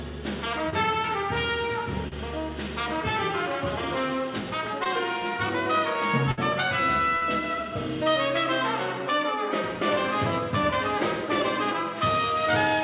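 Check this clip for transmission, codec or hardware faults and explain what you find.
Two kinds of transmission fault are audible: four short concealed packet losses and one burst of packet loss. The sound is band-limited, with nothing above 4 kHz, which fits a G.711 A-law call path at 64 kbps.

Short concealed packet loss occurs from 0.70 to 0.74 s, 2.08 to 2.14 s, 4.84 to 4.87 s and 7.17 to 7.24 s. About 20 ms of audio, or 40 ms at 7.17 s, arrived too late. The receiver extended the preceding sound for 14 to 44 ms before blending back, producing brief smears or wobbles.

A burst of packet loss occurs from 6.31 to 6.39 s. About 60 ms went missing in a row. The decoder stretched the last sound for roughly 59 ms while fading it down, heard as a held buzz or dying hiss, and then playback resumes with that stretch gone.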